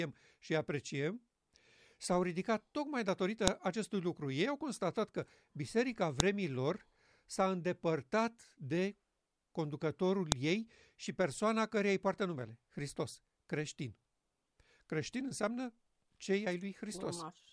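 A sharp, loud click snaps through the speech at 3.48 s, 6.20 s and 10.32 s. Each is a file header played as audio: separately saved WAV segments were joined with their headers intact, so a few dozen header bytes are decoded as sample values at every seam.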